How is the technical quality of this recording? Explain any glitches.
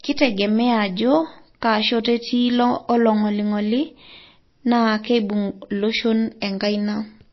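The technical quality is poor. Plainly audible compression damage runs through the whole recording.

Throughout the speech, nothing is present above 5.8 kHz, so the sound is dull and muffled. This is likely MP3 compression. Short of bits, the encoder cut all treble at a fixed point. It also dropped weak frequency lines, which come and go between frames. That gives a watery, swirly texture, with chirpy s sounds and smeared onsets. The damage fits a very low bitrate, around 24 kbps.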